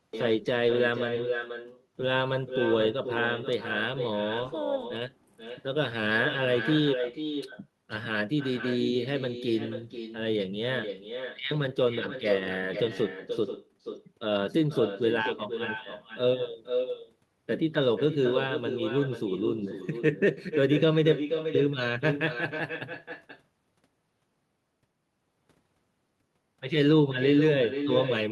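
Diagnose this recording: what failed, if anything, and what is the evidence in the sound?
Call processing failed: the far end is playing the call over a loudspeaker, its microphone picks that playback back up, and no canceller strips it out, so the result is echo with no canceller. Throughout the speech, each phrase returns about half a second later as a fainter copy, roughly 8 dB below the original, thinner from its trip through the distant room and back across the network.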